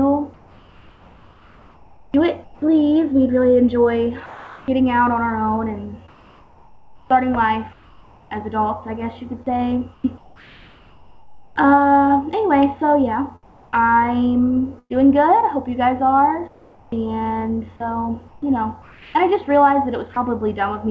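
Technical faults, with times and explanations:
0.34–20.16 s, sound chopped by the voice detector: about 6.8 s of quiet passages become steady synthetic hiss, likely voice-activity gating rather than packet-loss concealment's smeared repeats.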